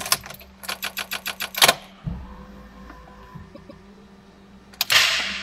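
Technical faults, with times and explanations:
0.83 to 1.55 s, repeated frames: the same 144 ms chunk plays five extra times, a stutter that stretches this stretch by 0.72 s.
3.54 to 3.83 s, repeated frames: a 144 ms chunk, which fits a short run of codec frames, comes round twice more, a shorter stutter adding 0.29 s.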